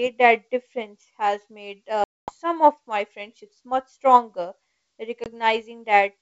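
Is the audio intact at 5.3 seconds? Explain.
No, not quite. There's packet loss on an ADPCM call right before it: about one packet, 20 ms, drops out from 5.24 to 5.26 s as a hard-edged silence, and the decoder's predictor and step size lose sync, so the speech after it returns slightly distorted while the decoder settles.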